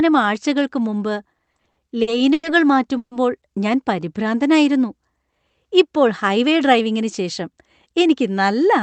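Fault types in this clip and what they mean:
Repeated stalls (stutter): just after "ആഴ്ചകൾക്ക് മുമ്പ്", nine brief holds between 1.33 and 2.45 s, the longest 100 ms, make the speech drag and stutter; unlike a freeze, the stops keep recurring.
Call audio freeze: a single 140 ms hold at 2.97 s, the last sound carried on and then about 70 ms of silence, likely from held-up packets; speech then resumes where it stopped.
Jitter buffer slow-down: from 3.94 to 4.30 s the speech runs at 91% speed with 38 ms added, drawn out at unchanged pitch rather than halting.
Jitter buffer speed-up: from 6.29 to 7.95 s the speech runs at 106% speed, roughly a tenth of a second trimmed away, sounding hurried while the pitch stays unchanged.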